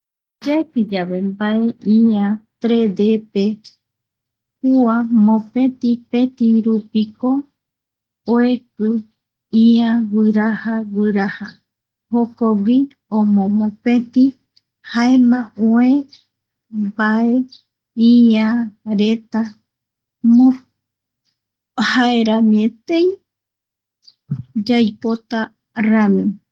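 Listening through the speech recording, nothing stood out as a technical fault at any point.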